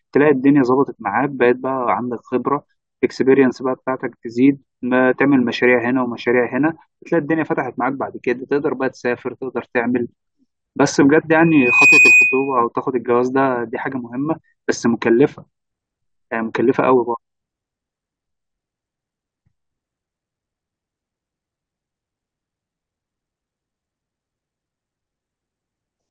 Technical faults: loudspeaker feedback squeal

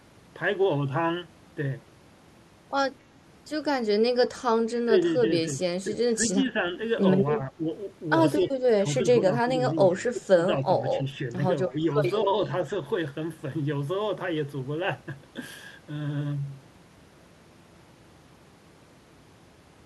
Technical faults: speech suppressed in double talk

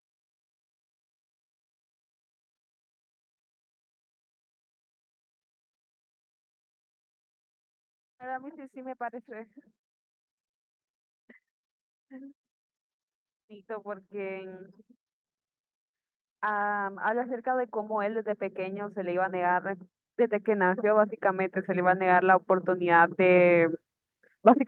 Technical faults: automatic gain rising

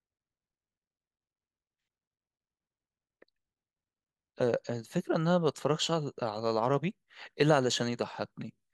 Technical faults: none

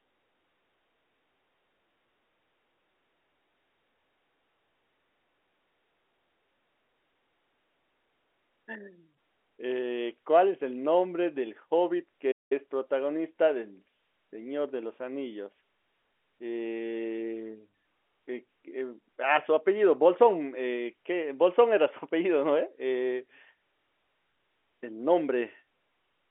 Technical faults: playback stall

